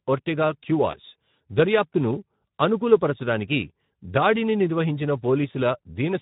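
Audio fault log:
throughout: Speex codec. The speech has a plainly audible hoarse, grainy roughness, with a noisy edge riding on voiced sounds. Speex is a CELP codec that models the voice as a filter driven by an excitation signal, and at this setting too few bits are left to code that excitation faithfully, so it degrades into noise. The degree of damage fits a bitrate of about 11 kbps.
0.91 to 0.95 s: VoIP packet loss concealed by the speech codec. A brief smear interrupts the speech, where the sound stretches and sags in level before normal speech resumes. The decoder had nothing to play for that moment and filled it by extrapolating from its last pitch and filter settings at falling gain. Because each frame builds on the previous one, the disturbance outlasts the gap itself, a single lost 20 ms frame.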